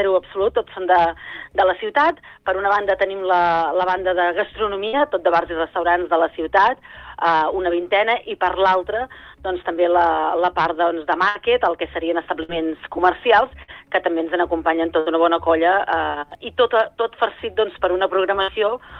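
A burst of packet loss strikes at 4.87, 11.29, 12.43, 13.63, 15.00 and 18.42 s. Each time, about 53 to 63 ms of concealment extends the last sound as a fading buzz or hiss, then 60 ms of audio is skipped. On a spectrogram this looks like smeared, dimming bands ending in a hard jump.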